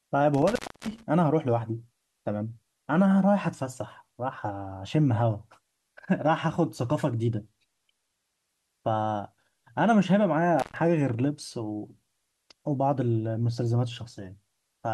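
From 0.34 to 1.03 s there is an intermittent contact fault: a loose cable or plug loses connection, so the speech drops out for about 300 ms, with crackle as the contact breaks and remakes and only faint hiss in the gap. The scratchy, irregular edges and the live hiss underneath set it apart from a digital dropout, which cuts cleanly to silence.

From 7.49 to 8.49 s a channel delay (comb filtering) appears. One channel trails the other by roughly a single sample, about 0.02 ms, and when the two are summed to mono the shared signal cancels at regularly spaced frequencies. With a delay that short, the first notch sits up near 20 kHz, so this is a slight dulling of the extreme top rather than an obvious hollowness. Because the notch stays fixed in place, it differs from a phaser's sweeping notches or from a low-pass filter's smooth roll-off.

At 10.59 to 10.76 s the intermittent contact returns, opening for about 117 ms. 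The break is shorter but has the same crackling edges and faint hiss in the gap.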